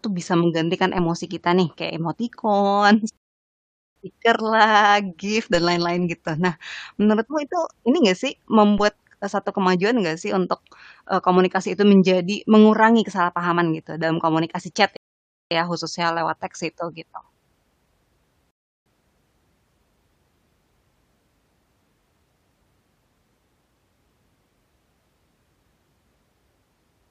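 At 3.17 s the player runs out of buffered audio, a rebuffering stall: the speech drops to silence until 3.96 s, then resumes exactly where it stopped, adding 0.79 s. At 5.55 s and again at 8.78 s the waveform's zero line jumps, a DC step, and the offset bleeds away through a 5 Hz high-pass; each is heard as a low thump while the speech carries on unchanged. Further stalls silence the audio from 14.97 to 15.51 s (0.55 s added) and from 18.51 to 18.86 s (0.35 s added), each picking up without loss.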